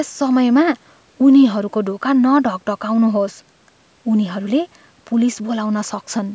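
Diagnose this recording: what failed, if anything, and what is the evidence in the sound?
Nothing failed: the speech sits within an ordinary call microphone path, with the lowest bass trimmed by its high-pass filter and no content above 8 kHz, and the signal shows no dropouts, distortion, timing errors or level faults anywhere in its run.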